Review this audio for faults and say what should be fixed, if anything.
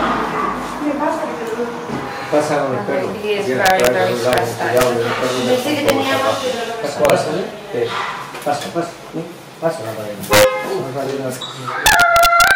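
Integer overflow cracks occur at 3.66–3.87, 4.33–4.38, 4.77–4.83, 5.89, 7.05–7.10, 10.33–10.44 and 11.86–12.51 s. Peaks about 1 to 5 dB over full scale wrap to the opposite sign, giving violent snaps rather than clipping's flattened buzz. Saturating arithmetic or limiting before conversion prevents this.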